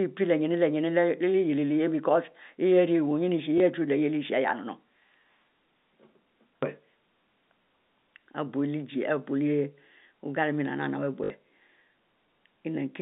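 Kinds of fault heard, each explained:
Packet loss with last packet repeated: the receiver replayed the previous packet over gaps, causing a brief blip at 3.58 s and a 60 ms buzzing, robotic repeat at 11.24 s.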